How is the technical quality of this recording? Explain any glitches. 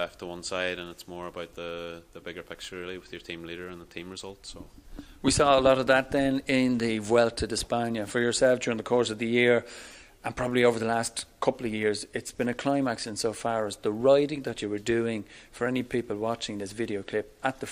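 No glitches to explain here, since nothing in the recording trips up technically and it just runs along without a hitch.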